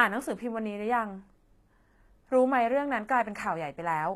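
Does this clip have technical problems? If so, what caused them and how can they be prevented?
Yes. Throughout the speech, the treble sounds gritty and metallic, and s sounds turn lispy. This is likely HE-AAC compression at a low bitrate, around 24 kbps. The treble is rebuilt from copied lower bands, so its harmonics don't match. Encoding at a higher bitrate, or with a codec that does not synthesize the treble, prevents it.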